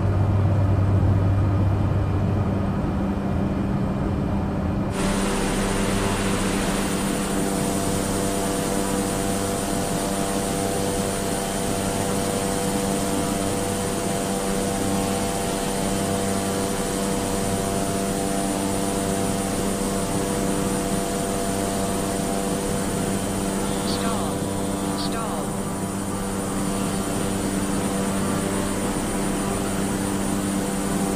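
At 15.88 to 15.90 s and again at 27.18 s, compressed frames are skipped: the decoder drops whole frames, so the audio jumps ahead, by roughly a tenth of a second and then a couple of hundredths.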